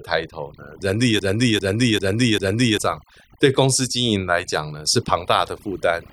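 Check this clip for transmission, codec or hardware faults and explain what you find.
Two faults stand out in this speech recording: noise suppression that is far too aggressive across the whole clip, and a stuck, repeating segment early on.

Overdone noise removal runs throughout. The suppressor shuts off frequency bands near its noise estimate and takes quiet parts of the voice with them, leaving near-silence with twinkling specks. A spectrogram shows an empty background with scattered bright dots and holes in the harmonics.

A broken-record loop runs from 1.19 s to 2.78 s. A 0.40 s fragment repeats exactly four times back to back, and the audio that belonged there is lost. The likely cause is a stalled player, encoder or stream resending its last fragment. The waveform shows one identical shape tiled end to end.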